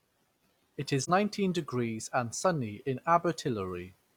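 Speech, with one AAC frame loss with muting from 1.04 to 1.10 s. The sound dips briefly and comes back. The hole is about 43 ms, consistent with one zeroed frame.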